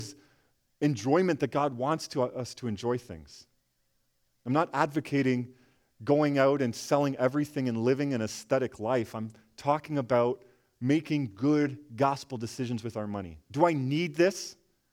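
No technical faults can be heard anywhere in the speech. Nothing in the recording calls for a time or a value to be noted.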